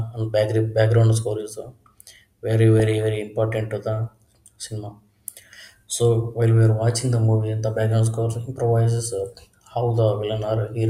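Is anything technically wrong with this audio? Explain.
Yes. Weak reception let bit errors past error correction into the MP2 data, putting short blips of noise into single sub-bands: DAB burbling at 2.79 to 2.98 s, before "very important to the", a patch of noisy blips.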